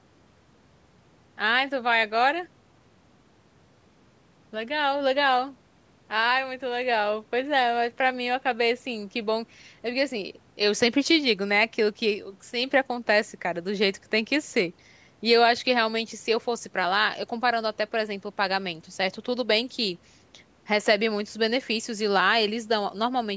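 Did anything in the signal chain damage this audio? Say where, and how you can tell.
No, nothing in the chain damaged this speech; it went through ordinary call microphone processing, which trims the lowest bass as it's meant to and leaves nothing above 8 kHz, and that's just how that stage works.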